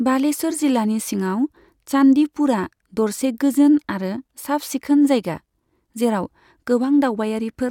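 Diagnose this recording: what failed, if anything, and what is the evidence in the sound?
Nothing failed, and the sound gives no evidence of a fault at any stage of this recording.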